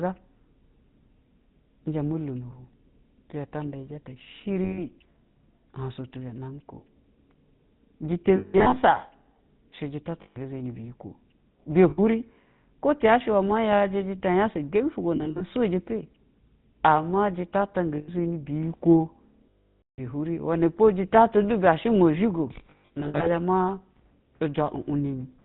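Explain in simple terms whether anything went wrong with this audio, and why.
The whole recording sounds buzzy and gravelly, with no crisp top end. That is the GSM full-rate codec, an early mobile-phone coding method that rebuilds the voice from a rough model driven by evenly spaced pulses and discards everything above 4 kHz.

Short stretches also turn into a rough metallic ring at 4.64–4.83 s, 8.36–8.78 s, 10.22–10.37 s (just before "zɛni biyikwo"), 11.90–11.99 s, 15.16–15.42 s, 17.96–18.10 s, 19.50–20.00 s and 22.70–23.29 s. These are lost GSM frames. The decoder fills each gap by repeating the last good chunk at falling volume, so the longest gap, at 19.50 s, fades toward silence.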